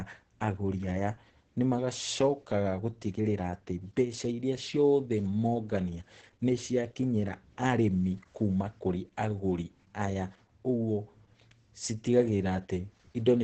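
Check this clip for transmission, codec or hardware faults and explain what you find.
One codec fault runs through the whole clip. Throughout, the speech sounds muffled, hoarse and faintly robotic, with nothing above 8.9 kHz. This is Opus voice compression, whose coarse SILK excitation coding fits a rate near 10 kbps.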